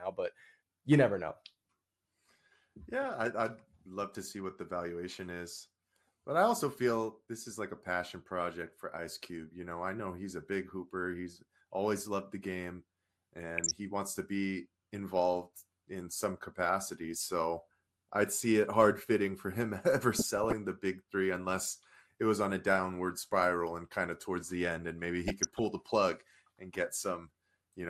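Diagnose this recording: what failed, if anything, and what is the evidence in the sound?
Codec stage: the speech is dull and gurgling throughout, with upper sub-bands dropped and coarse quantisation, likely MP2 compression at a rate that fits 80 kbps.

Reception stage: bit errors slip past error correction into the MP2 data, causing DAB burbling at 13.57–13.71 s before "he wants to be", 20.15–20.53 s before "the big three unless", and 25.28–25.64 s between "the end and maybe" and "the plug and".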